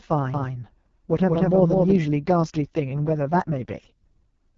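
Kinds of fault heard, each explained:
AMR wideband (HD Voice) codec: The speech is coded through a model-based wideband codec whose roughness and raspy texture fit its lowest 6.6 kbit/s mode. The damage is heavy throughout, and nothing is present above 7.1 kHz, with the top band filled by shaped noise.
Doubled audio track: From 0.34 to 1.96 s a second full-band copy of the speech runs about a fifth of a second behind, at roughly equal loudness. It has no decay or room colour, and it starts and stops abruptly, likely from a slower capture path.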